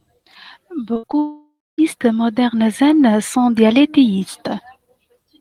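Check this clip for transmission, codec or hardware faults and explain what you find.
Two transmission faults show up close together, early in the clip.

From 0.93 to 1.15 s there's repeated packet loss, giving that robotic sound. Four short gaps, the longest 60 ms, get papered over by stretching the previous audio, so about half that span is synthetic fill and it comes out choppy.

Right after, from 1.19 to 1.80 s, the audio smears into a fading buzz and then goes quiet for about 240 ms. That's most likely a long network dropout: roughly 600 ms never arrived, the receiver extended the last sound until it died out, and playback resumes without the lost stretch.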